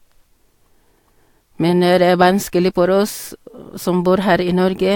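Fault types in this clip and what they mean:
No faults present: no dropouts, level anomalies or timing disturbances on this speech track.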